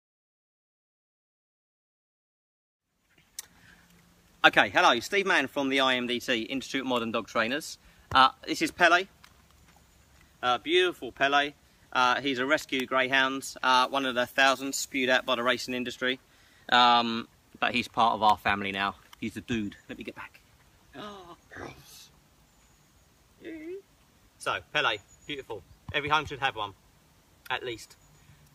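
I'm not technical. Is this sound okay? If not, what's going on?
No. From 13.74 to 15.74 seconds the sound turns thin, bright and hissy, with sharp S-like sounds, then returns to normal. This is pre-emphasis left on. The treble was deliberately boosted for storage, and the matching step that should turn it back down was skipped. The rise fits the CD-style emphasis curve. Unlike a fault that removes the bass, the low end is still there. Only the highs are pushed up, for exactly two seconds.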